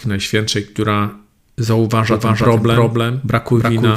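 From 2.11 s until the end, a doubled audio track appears: a second full-band copy of the speech trails the original by roughly a third of a second, at about the same loudness. It is likely caused by a second, slower capture path or an edit leaving two copies out of step. Unlike an echo or reverb, the copy cuts in abruptly, repeats only once, and has no decay tail or room colour.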